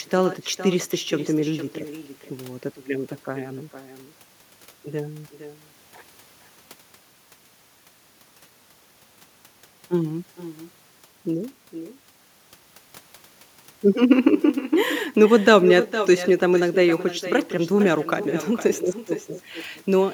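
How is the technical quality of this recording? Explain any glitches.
The recording is marred by echo with no canceller, present throughout. The far end's loudspeaker fed back into its microphone with nothing removing it, so every phrase returns about half a second later as a thinner copy roughly 13 dB quieter.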